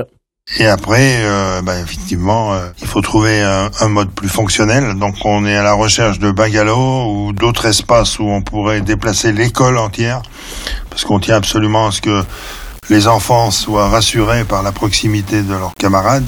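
Low bit depth without dither begins at 12.21 s and runs to the end of the clip. From there the sound turns grainy and gritty, with a rough distortion that moves with the signal. The likely cause is rounding to only about 6 bits with no dither, so the error tracks each change in level. It sits around 25 dB below the signal.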